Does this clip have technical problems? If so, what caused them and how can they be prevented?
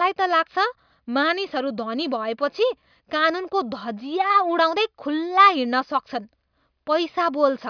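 No, nothing in this speech recording points to a technical fault, so there is no cause to trace and nothing to prevent.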